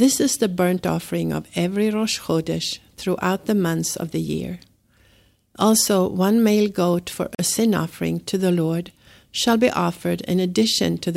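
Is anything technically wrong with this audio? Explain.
Yes. There is one fault in this speech clip. At 7.35 to 7.39 s the sound drops to silence for about 42 ms, then resumes. This is likely a Bluetooth stall. Radio interference would delay packets on the wireless link. The headphones' buffer would empty before new audio arrived. Playback then pauses until the resent packets come through. The result is a brief hole in the speech rather than a click or a burst of noise.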